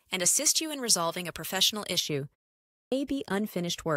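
A speech clip whose first two seconds, from 0 to 2.0 s, sound thin, glassy and hissy on sibilants. That is pre-emphasis left on: the treble lift, here matching a J.17 curve, was never undone by de-emphasis, leaving 10 kHz about 11 dB hotter than 1 kHz. At 2.58 s, after a 0.31 s pause, speech bursts in abruptly with its opening missing until 2.92 s, roughly a third of a second swallowed. This is a clipped start after a pause: the output device dozed during the silence and needed that long to wake and resume playback.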